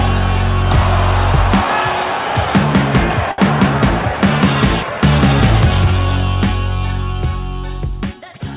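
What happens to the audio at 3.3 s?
Right around 3.31 to 3.40 s there's a short stall from a late packet. A packet showed up late, the jitter buffer ran dry, and the receiver stretched the last sound for about 66 ms before carrying on. Nothing's lost, but that bit sounds held too long, with a faint buzzy dip.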